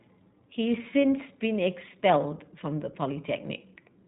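Throughout, the speech has passed through the iLBC codec, which fits its 15.2 kbps, 20 ms frame mode. Nothing above 4 kHz survives, leaving it muffled, with plainly audible damage that sounds a little rough and synthetic.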